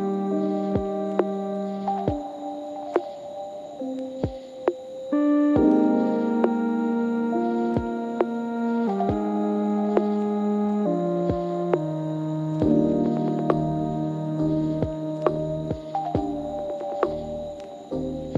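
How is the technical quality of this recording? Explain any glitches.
The recording has one glitch, a short dropout-style jump in the sound around 3.65 s.

Compressed frames skipped, 3.65 to 3.67 s: a couple of whole frames of the encoded audio never reach the output, likely because they were missing or rejected by the decoder as corrupt. Playback jumps ahead by about 50 ms, which fits roughly two frames.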